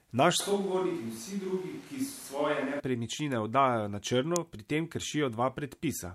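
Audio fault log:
0.40–2.80 s switch to a distant microphone: the close mic likely dropped out, leaving a farther pickup, so the speech turns roomy and thin, about 5 dB quieter, with audible background noise.
4.36 s electrical switching spike: a nearby switch or static discharge was likely picked up by the audio line, adding one sharp snap over the sound.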